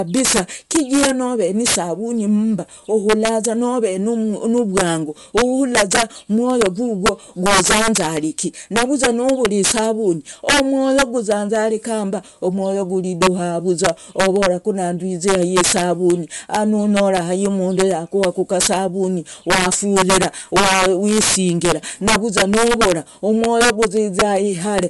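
Integer overflow runs through the whole speech recording. The signal is driven about 17 dB past full scale, and instead of being limited, the overshooting peaks wrap around to the opposite sign. Around 2 percent of samples flip across the range, giving violent cracks on loud syllables, far harsher than clipping.

Bluetooth LC3 compression is also audible for the full length. Nothing remains above 11.5 kHz, and the upper band has a plainly breathy, grainy texture, which points to noise-filled high frequencies. This is likely from LC3 coding at a modest rate, consistent with about 48 kbps in 10 ms frames.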